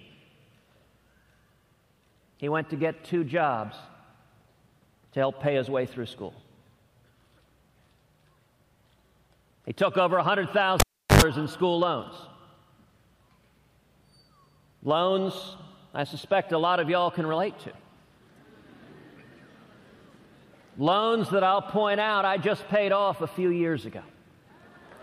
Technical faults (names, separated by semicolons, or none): cable pulled and plugged in